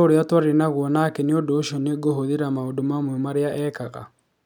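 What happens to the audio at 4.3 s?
At 4.3 s the speech carries on cleanly, with no dropout, click, distortion or other fault at that point.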